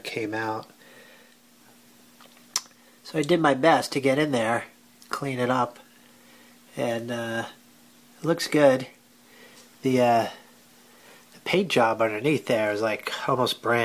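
Nothing here stands out as a technical fault; the audio just runs along without any glitch, dropout or distortion that a careful listener would catch.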